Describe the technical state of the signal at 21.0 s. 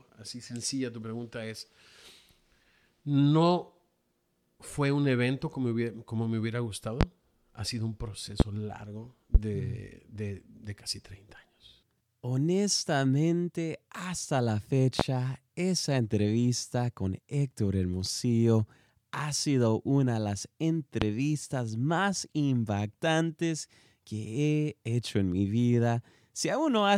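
At 21.02 to 21.05 s a single loud pop cuts into the speech. It peaks roughly 20 dB above the surrounding level. It is likely a sudden voltage pulse, from a plug, switch or static, shaped by later circuits. The speech continues underneath.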